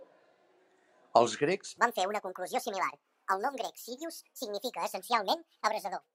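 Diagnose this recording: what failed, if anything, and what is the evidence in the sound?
From 1.78 s to the end, the speech suddenly turns high and hurried, playing at 1.63 times its proper speed, with the pitch raised by roughly ten semitones along with the tempo. This is a section at the wrong speed, and the cause is likely a sample-rate or clock mismatch at the editing or playback stage, where that stretch is read out faster than it was captured, so duration shrinks and pitch climbs together.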